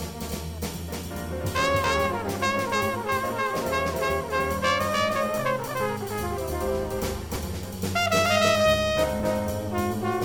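A doubled audio track runs throughout the sound: a second full-band copy at roughly the same level trails by around 300 ms, dry and without room colour. The likely cause is the signal being captured twice, through a slower second path or an edit holding two copies out of step. A dropped buffer (overrun) occurs at 1.84 s, 7.36 s and 9.2 s, heard as the sound jumping ahead rather than any gap. Around 20 ms is lost at the first two points and around 40 ms at the third, likely because the hardware overwrote samples before the program collected them.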